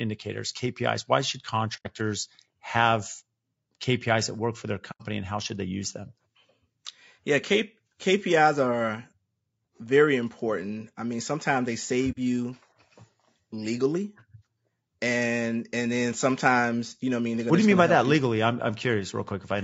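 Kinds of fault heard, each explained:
Low-delay AAC compression: The speech sounds rough and grainy throughout, with plainly audible damage. Noise fills the gaps between harmonics, and the top band sounds thin and synthetic. The likely cause is AAC-ELD at a low bitrate, around 32 kbps. Its short frames resolve pitch poorly.
AAC frame loss with muting: The sound fades into brief soft-edged silences. The first is at 1.76 to 1.87 s. The second is at 4.91 to 5.02 s, after "that work for their" and before "and how should they". The third is at 12.11 to 12.18 s, after "I mean sometimes they". The holes last about 90, 90 and 60 ms, which fits whole frames being dropped and zeroed.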